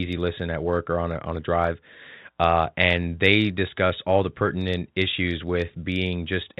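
No technical faults occur at any point in the speech, which comes through G.711 telephone coding with that format's normal narrow bandwidth.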